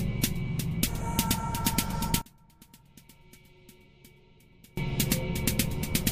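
From 2.22 to 4.77 s the audio drops by about 27 dB to a faint residue. This is likely one channel inverted, cancelling shared content when summed to mono.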